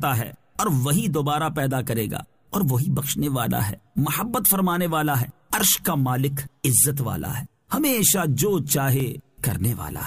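A tiny skip, where the waveform jumps abruptly, comes at 9.00 s in the audio. This is an overlap between stream segments: two adjacent segments claimed the same stretch of time, and the player discarded around 18 ms of sound that was never actually duplicated. The stream used 6-second segments.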